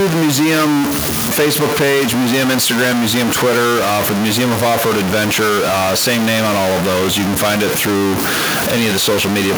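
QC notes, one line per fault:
Throughout, stuck bit: distortion on the speech and noise filling the pauses, likely one data bit pinned, knocking about half the samples off.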